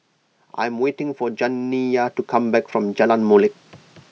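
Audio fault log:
0.58 to 3.59 s, automatic gain rising: the level of the speech and the background climbs together over about three seconds, ending roughly 13 dB louder than where it started. The automatic gain control judged the input too quiet and raised its gain gradually rather than in a step, so the whole signal swells evenly instead of jumping. The call microphone processing on this path also leaves nothing above 8 kHz, which is expected and separate from the gain change.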